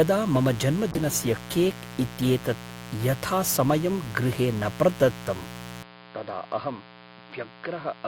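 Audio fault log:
Throughout: mains buzz. A steady, raspy buzz sits under the speech at roughly 15 dB below it, built on a 60 Hz fundamental. Sharp switching spikes twice per cycle carry harmonics of 60 Hz well up into the kilohertz range, so the buzz is edgy rather than a smooth hum.
0.92–2.53 s: call bitrate drop. The speech turns rough and watery, with the top end dulled, for about 1.5 s before clearing just ahead of "यथासमयं गृहे". This fits the encoder being pushed from around 64 kbps down to about 23 kbps, coding more coarsely and trimming high frequencies.
5.83 s to end: input switched to a poorer device. The sound abruptly becomes dull and boxy, with nothing above 5 kHz, and drops noticeably in level, roughly 10 dB, with no gap at the change and a faint new noise floor well below the speech. The likely cause is the input moving to a narrower-band microphone or headset profile.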